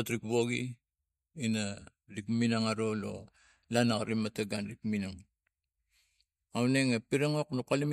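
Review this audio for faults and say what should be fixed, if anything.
No faults; nothing needs fixing.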